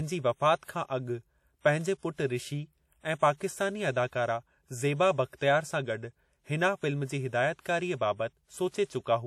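From the start, the speech carries clearly audible WMA compression damage, a ringing, washy quality with a hiss that swells and fades along with the voice. That points to an older WMA encoder with long transform blocks, and the level of damage fits a bitrate of around 48 kbps. At 7.60 to 7.65 s there's a pre-echo: a brief hiss of about 51 ms creeps in just ahead of a sharp attack. The codec spread its quantisation noise across the whole block, so the quiet moment before the onset got filled, leaving the attack softened and smeared.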